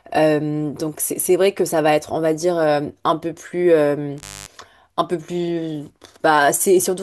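At 4.17 s the speech drops out with a crackle at each edge for about 0.24 s, leaving faint hiss, then returns by 4.52 s: an intermittent contact, a loose plug or cable briefly opening.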